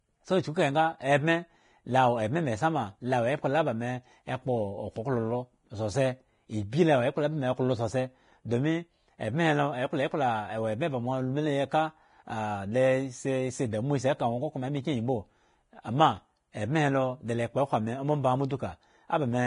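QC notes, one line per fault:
throughout, Vorbis compression: the speech sounds hissy and grainy, with nothing above 10.5 kHz and roughened tones. This is likely heavy Vorbis coding, which fits a low bitrate around 30 kbps, where coarse treble quantising turns fine detail into noise.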